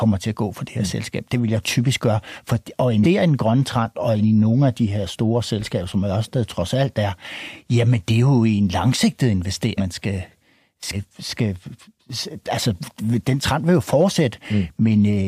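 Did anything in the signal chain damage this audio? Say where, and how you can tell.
Yes, compressed frames skipped in decoding. The speech jumps ahead at 3.03 s before "i en grøn trend", at 9.77 s after "er jo en langsigtet", and at 10.92 s, losing roughly 200, 300 and 200 ms. Each jump drops whole 42.7 ms frames, roughly five, seven and five of them.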